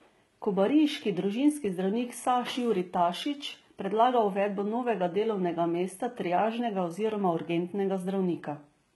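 From start to finish the speech has a bright but synthetic top end: s sounds come out gritty and lisping, with a metallic sheen rather than clean hiss, and nothing reaches above about 11.8 kHz. This is likely HE-AAC compression at heavy damage levels, consistent with a very low rate around 16 kbps. Only the lower band is truly coded; the treble is rebuilt by copying lower bands upward, so its harmonics no longer match.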